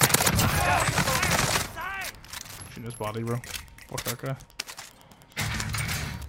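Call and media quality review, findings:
Steady faint ticking, just under ten per second, running through the whole clip, sitting roughly 30 dB below the audio. Wi-Fi interference. Probable component: unshielded analogue input or mic preamp near a Wi-Fi radio. Mechanism: circuit rectifies the radio's beacon bursts, sent every 102.4 ms, turning each transmission into an audible click at that fixed rate.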